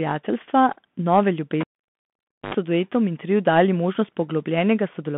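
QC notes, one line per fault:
throughout: Bluetooth CVSD headset codec. The band runs only from 150 Hz to 3.5 kHz, so everything sounds thin and boxed in. The coarse one-bit coding fits a 64 kbps headset link. It leaves a granular hiss under the speech, scratchy s sounds, and distortion where loud high content outruns the adaptive step.
1.61–2.54 s: cable pulled and plugged in. A pop at 1.61 s marks the live cable coming out. Near silence follows for about 0.89 s. Then about 82 ms of 50 Hz mains buzz as only the tip touches, and a second pop at 2.54 s brings the sound back.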